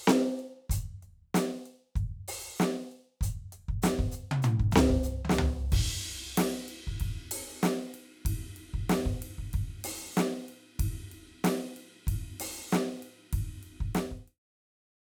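Music clip with no technical faults; the fade-out from about 13.5 s to 14.4 s is smooth and deliberate, with no click or hard edge.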